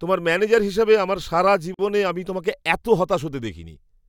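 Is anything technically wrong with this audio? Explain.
Yes, there's a gap at a join of encoded pieces, from about 1.74 to 1.79 s, right after "ম্যানেজার হিসেবে আমার সারা" and before "আমি তোমাকে এত". The speech just drops out for roughly 47 ms, with its edges smeared by the codec, then picks up exactly where it left off. It sounds like two separately encoded segments were butted together without trimming the encoder's start delay and end padding, leaving that silence in the join.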